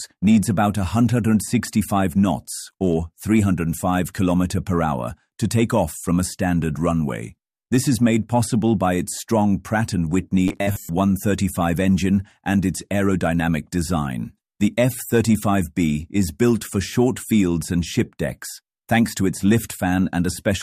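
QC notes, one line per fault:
10.48–10.89 s, robotic sound from repeated short buffers: new audio likely arrived too slowly, so playback looped a 10 ms slice through most of this stretch and skipped the real signal. The repetition imposes a fixed 100 Hz pitch, a rigid, metallic buzz.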